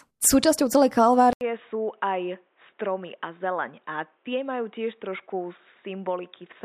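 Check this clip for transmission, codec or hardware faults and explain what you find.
One fault is present. At 1.33 s the input likely switched to a poorer device, after an 80 ms gap. Its narrower capture band leaves nothing above 3.8 kHz to the end, so the speech turns dull and boxy, drops roughly 10 dB, and gains a faint new background noise.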